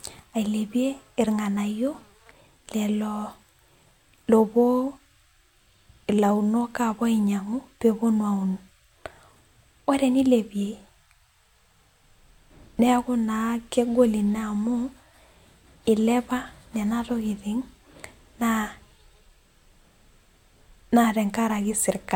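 The clip is speech with one sharp click at 7.05 s. The fault is dropped samples. Only a handful are gone, a fraction of a millisecond in all. That is far too little to remove any sound. The waveform simply jumps from one value to a later one, and that step is heard as the click. In a spectrogram it would show as a thin vertical line. The likely cause is a brief loss of a few samples in the stream.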